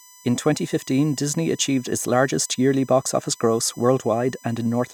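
A thin, fixed-pitch whine sits under the speech for the whole clip, built on 1 kHz with its strongest harmonic at 6 kHz, roughly 30 dB below the voice. This is USB whine: current drawn in the bus's 1 ms frames leaking into the audio through power or ground.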